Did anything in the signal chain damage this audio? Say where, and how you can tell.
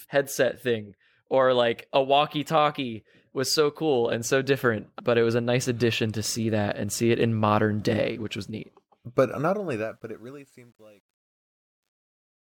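Yes. The fade-out at the end of this speech clip suffers truncation distortion, introduced at the digital gain or sample-format stage. From 9.32 s the fade turns grainy, and from 10.15 s to the end at 12.41 s the grit is at its worst. The steps sound coarse enough to suggest something like a 10-bit word without dither. A noise gate would cut off cleanly and a codec would smear the sound, but here the grit tracks the falling level.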